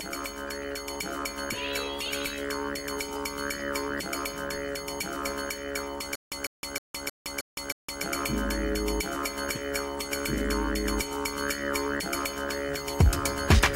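From 6.15 s to 8.04 s there is a stutter with silent gaps: one 150 ms fragment plays six times, each followed by 163 ms of digital silence, giving a steady 314 ms cycle. A stalled stream likely replayed its last fragment at each retry, and the sound that belonged in that span is lost.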